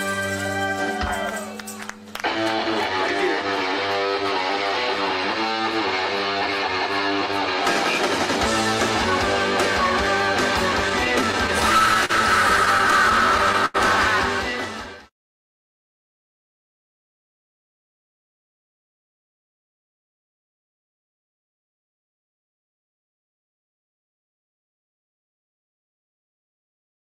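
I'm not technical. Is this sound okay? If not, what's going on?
No. From 10.89 to 12.11 s and again from 12.65 to 13.76 s, the sound drags and hiccups. These are repeated stalls (stutter): the audio kept arriving late, so the player briefly stretched the last sound while waiting, sometimes for nearly a tenth of a second.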